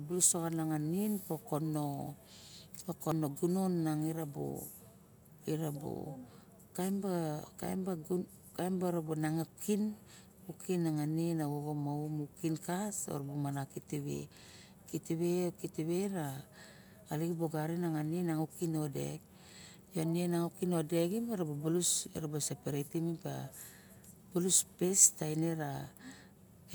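At 3.12 s the speech skips ahead, likely a dropped buffer (overrun): roughly 30 ms of samples were overwritten before being read, and the remaining ends were butted together. The waveform shows an abrupt step with no gap, and the spectrogram a thin full-height vertical line.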